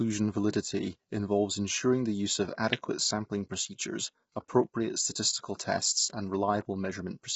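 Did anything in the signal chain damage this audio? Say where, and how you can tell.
Yes, at the codec stage, across the whole clip. The speech is rough and grainy, with noise between harmonics and nothing above 7.8 kHz. That points to heavy low-delay AAC compression, likely AAC-ELD near 16 kbps, whose short frames smear pitch detail.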